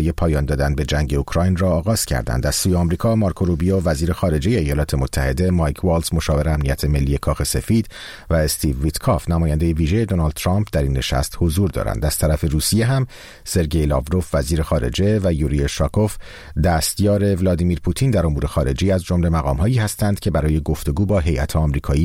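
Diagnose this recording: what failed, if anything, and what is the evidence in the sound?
Nothing stood out on listening that would point to a failure at any stage of the chain.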